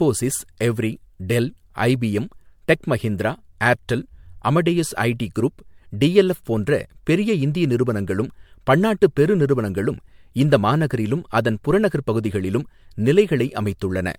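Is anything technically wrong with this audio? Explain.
Yes. Throughout the speech there is generation loss, likely from repeated lossy re-encoding, with the character pointing to MP3 at around 96 kbit/s passed through roughly five times. Each decode and re-encode quantises the signal again on a shifted frame grid, so the noise and spectral holes of every pass pile up. The result sounds swirly, smeared and hollow, worse than a single encode at that rate, and consonant attacks are blurred, with nothing above about 20 kHz.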